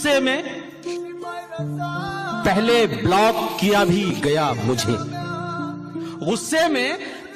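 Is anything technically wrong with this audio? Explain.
No, no technical faults here.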